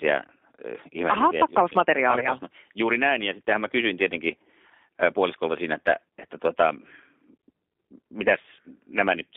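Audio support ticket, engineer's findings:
G.729 codec across the whole clip: band limited to roughly 250 Hz to 3.6 kHz, plainly audible synthetic, gritty texture on the speech. Sounds like a G.729A leg, which fits 8 kbit/s. The decoder resynthesises speech from a filter, pitch predictor and sparse pulses, so fine detail gets lost.

VoIP packet loss concealed by the speech codec, 2.19 to 2.28 s: a short smeared or buzzy patch that dips in level. It fits a single lost 20 ms packet. The decoder repeated its last pitch and filter at falling gain, and recovery dragged on for about 80 ms.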